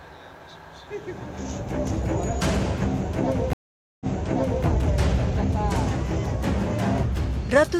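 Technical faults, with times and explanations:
3.53–4.66 s stream reconnect: a flat 0.47 s gap in the waveform and a blank spectrogram column, then audio from 0.65 s earlier repeats as the reconnected decoder restarts.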